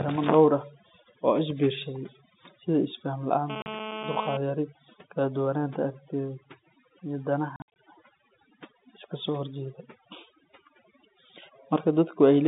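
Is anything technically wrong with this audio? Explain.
Yes, there are three kinds of fault in this speech recording.

Throughout the clip there is overdone noise removal. The pauses between phrases drop to a near-dead hush dotted with faint twinkling specks. A noise reducer set far too aggressively is cutting individual frequency bands whenever they sit close to its noise estimate. Quieter parts of the voice fall below that threshold and vanish with the noise, leaving isolated bands flickering on and off.

From 3.50 to 4.37 s, starting just after "oo isbiirsaday sida isfahan" and ending before "yari kala duwanaanta aragtiyeed", a hard, raspy buzz sits on top of the speech at about 9 dB below the voice. This is GSM phone buzz. It is pitched at 217 Hz with a dense stack of harmonics, which fits a 2G handset in an active call. The phone transmits in bursts 217 times a second, and nearby audio circuitry rectifies those radio pulses into sound that has nothing to do with the speech.

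There is also packet loss filled with silence. At 3.62 s, inside the buzz and right after "oo isbiirsaday sida isfahan", a 40 ms hole cuts the sound off cleanly. Its length fits two 20 ms packets. From 7.56 to 7.68 s the speech stutters: 140 ms of audio drops out in scattered gaps over about 200 ms, and the longest single gap is 60 ms. In both places the receiver inserted silence for the missing packets, so the gaps start and stop abruptly. The telephone band, running from 150 Hz to 3.7 kHz, is consistent with G.711 mu-law coding at 64 kbps.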